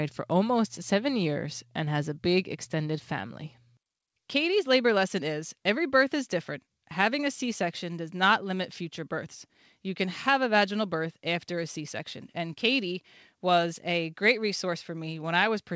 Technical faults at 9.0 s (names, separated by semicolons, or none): none